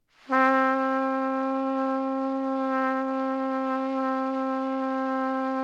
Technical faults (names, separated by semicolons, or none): none